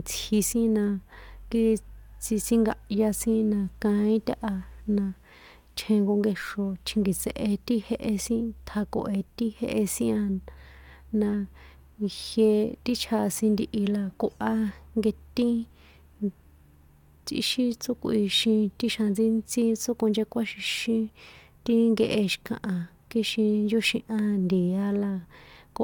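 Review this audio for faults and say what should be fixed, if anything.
No faults were found, so nothing needs fixing.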